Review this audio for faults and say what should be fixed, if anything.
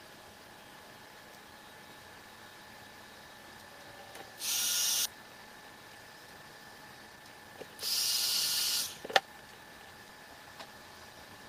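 There's a skip ahead at 5.05 to 5.07 s: about a second of audio got dropped, so playback jumps straight forward with no filler. The receiver likely threw away queued audio when its buffer overflowed. Letting the buffer shrink gradually instead of flushing would prevent it.

Right after that comes a jitter buffer speed-up from 5.14 to 7.73 s, running at 118% and trimming roughly half a second by cutting out tiny pitch-period chunks. A second, gentler one at 8.94 to 9.65 s runs at 112% and removes around a tenth of a second. Pitch holds but things feel rushed. Capping how fast the buffer drains would smooth this out.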